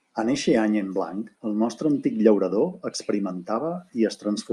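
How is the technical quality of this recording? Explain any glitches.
The recording carries a steady fault through nearly its whole length. From 0.12 s to 4.51 s there are clock slip clicks: a fine, regular ticking, about one every 0.04 s, around a hundred in all, coming fast enough to blur into a soft rattle under the speech. Each slip drops or repeats a single sample. The likely cause is two devices running on unlocked clocks differing by roughly 500 ppm. Unlike buffer dropouts, there are no audible gaps, and the spacing never varies.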